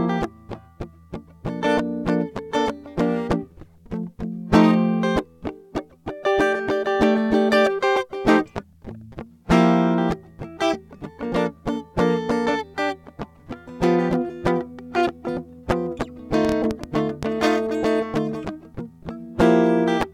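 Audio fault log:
16.45–17.24 s train of clicks: likely interference or a faulty connection injecting pulses, giving about seven unevenly spaced pops, 6.4 per second, standing well above the music.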